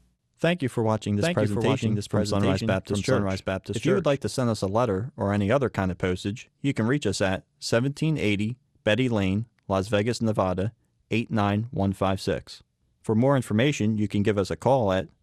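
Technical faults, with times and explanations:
1.21–4.17 s doubled audio track: a second, full-band copy of the speech runs about 0.7 s behind the original and roughly 5 dB quieter, so each phrase is echoed by a flat, dry repeat with no decay or room colour. It cuts in and out abruptly at both ends. This is likely from a second, slower capture path or an edit holding two copies out of step. On a spectrogram the speech pattern appears twice, offset in time. The waveform shows overlapping envelopes.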